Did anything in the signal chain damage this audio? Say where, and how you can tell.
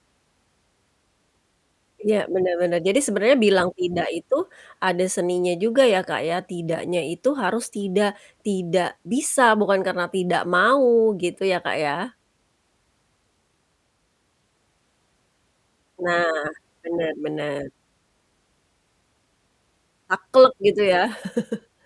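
No, nothing in the signal chain audibly damaged this speech recording, and the signal holds steady and continuous throughout with no sign of trouble at any stage.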